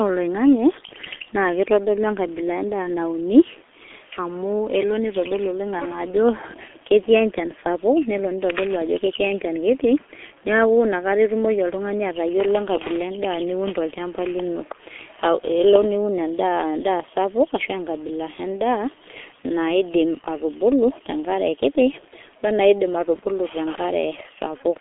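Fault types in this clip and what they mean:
G.723.1 codec: The speech was squeezed through the G.723.1 internet-telephony codec at a rate that fits 6.3 kbit/s, heavily damaging it, and carried on a narrow 250 Hz to 3.4 kHz line. Nothing above 3.7 kHz survives, so the speech sounds muffled throughout. Because the codec rebuilds the voice from a simple model refreshed only every 30 ms frame, the voice turns hoarse and the consonants blur together.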